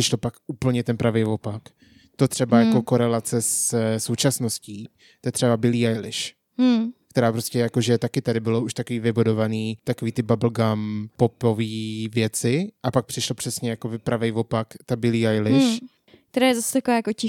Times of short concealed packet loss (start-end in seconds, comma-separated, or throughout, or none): none